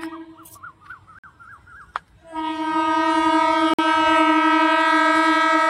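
The audio was carried in 2.5-second chunks, and a gap between chunks opens at each join, cutting the sound with 50 ms silent holes at 1.19 s and 3.74 s.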